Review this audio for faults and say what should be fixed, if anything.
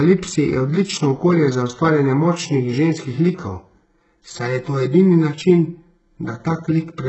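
The speech is heavily degraded throughout, with nothing above 8 kHz. What treble remains sounds rebuilt rather than captured: its upper harmonics don't line up with the fuller band beneath, and the top end has a synthetic, gritty, metallic quality. This is likely HE-AAC compression at a very low bitrate, around 8 kbps. The codec keeps only the lower spectrum and fills in the highs by spectral band replication, copying lower bands upward under a coarse envelope. To prevent it, deliver the audio at a higher bitrate or with a codec that codes the full band directly.

From 3.84 s to the end at about 7.08 s, the sound turns hollow or phasey, with fixed notches that don't move as the speech changes. This is channel delay (comb filtering). One channel arrives around 5 ms late, and when the two are summed to mono, the content they share cancels at evenly spaced frequencies. The first notch falls near 100 Hz, and further notches repeat roughly every 200 Hz above it. 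To prevent it, keep the channels time-aligned before any mono fold-down, or take a single channel instead of summing.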